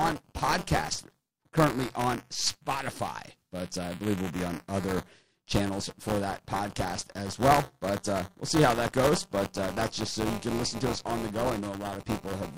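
Buffer tearing throughout. Writer and reader slipped, so about a tenth of each buffer replays audio some 20 ms old. Speech gets a 200 Hz rattle.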